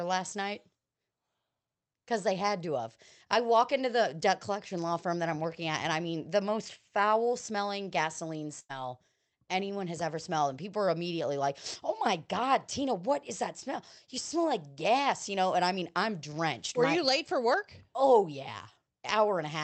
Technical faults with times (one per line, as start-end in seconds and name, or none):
8.59-8.71 burst of packet loss